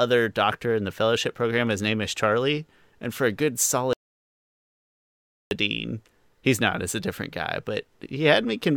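At 3.93 s the speech cuts off abruptly and the track falls to silence, with no room tone or hiss, until the sound returns mid-flow at 5.51 s. This is an audio dropout to silence lasting about 1.58 s, most likely from the input signal being lost while the recorder kept writing silence. On a waveform the trace collapses to a flat line; on a spectrogram it shows as a sharp-edged, dark band.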